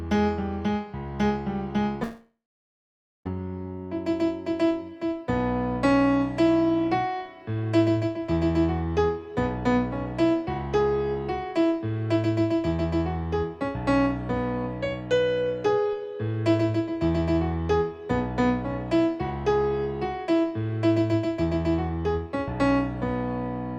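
From 2.03 to 3.27 s comes a long network dropout, likely from packets that never arrived. The last sound smears into a fading buzz, then about 0.9 s of silence. The waveform flattens and the spectrogram goes empty before audio resumes, missing that stretch.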